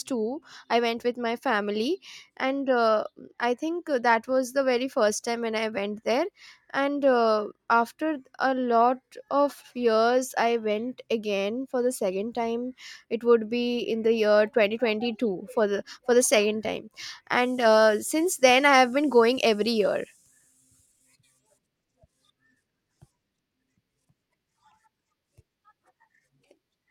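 Nothing technically wrong turns up anywhere in this stretch of recorded speech, so there are no times or causes to point to.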